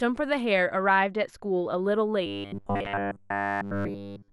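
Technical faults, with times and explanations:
Throughout: channels drifting apart. Summed to mono, the speech carries a slow flanging sweep. The two channels run on clocks differing by around 40 parts per million, so their offset creeps up to a fraction of a millisecond, sliding comb notches through the spectrum.
2.26 to 4.32 s: robotic sound from repeated short buffers. The speech becomes a rigid, metallic buzz at 100 Hz that only loosely follows the words. It is likely caused by new audio arriving too seldom, so the last 10 ms is replayed over and over in place of all the real sound.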